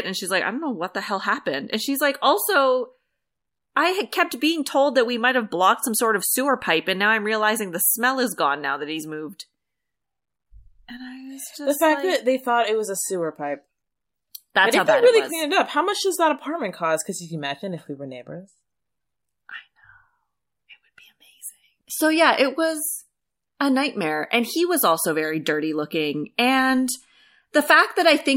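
Nothing technically wrong turns up anywhere in this bit of speech, so there's no trouble to point at and no times to flag.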